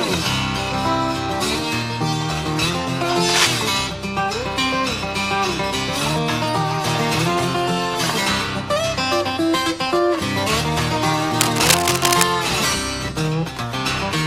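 At 3.29 s there's a short burst of cable scratch noise lasting until 3.58 s, then a longer one from 11.41 to 12.27 s. Both are a dense, uneven scratching and rustling that sits right on top of the sound at roughly the same loudness as it. The likely culprit is a worn cable, connector or control being moved, so the contact resistance jumps around rapidly and sprays those crackly bursts into the signal.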